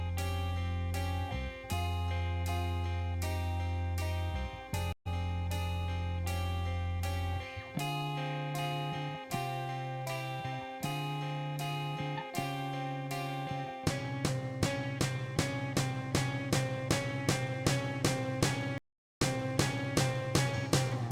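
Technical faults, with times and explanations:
4.93 to 5.07 s, stream reconnect: the sound cuts out for 132 ms, then resumes about a tenth of a second further on. The connection dropped and a fresh decoder restarted at the live position. Unlike a plain dropout, a short stretch of material is skipped, and the restart comes in softly rather than snapping back.
18.78 to 19.95 s, stream reconnect: a 423 ms silence, after which the audio resumes 743 ms earlier than where it stopped, so that passage plays twice. The server resent a burst of buffered data on reconnection. This backward jump with a fresh decoder start sets it apart from a simple gap or a stutter loop.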